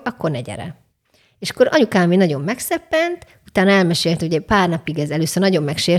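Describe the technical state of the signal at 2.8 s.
At 2.8 s the speech signal is intact, with no dropout, clipping, glitch or other fault at that point.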